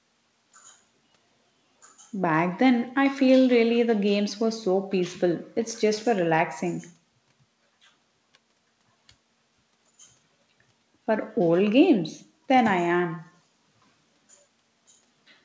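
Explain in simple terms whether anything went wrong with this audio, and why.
Nothing went wrong here: the speech comes across as you'd expect from an ordinary internet call, and the fact that the sound stops at about 8 kHz, missing the very top sparkle, is just how this kind of call connection normally carries audio.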